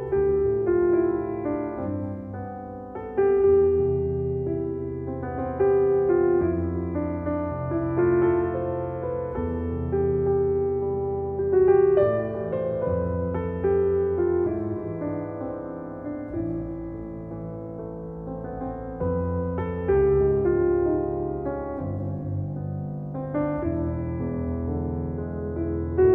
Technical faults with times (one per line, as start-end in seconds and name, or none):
none